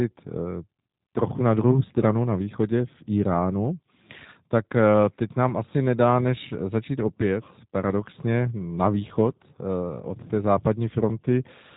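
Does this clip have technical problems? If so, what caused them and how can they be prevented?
Yes. G.729 codec damage runs throughout: the speech is rebuilt from a vocal tract filter, pitch predictor and sparse pulses, leaving a plainly rough, synthetic texture consistent with 8 kbit/s G.729A, and nothing passes above 3.8 kHz. Prevent it by using a wideband codec such as Opus at a higher bitrate.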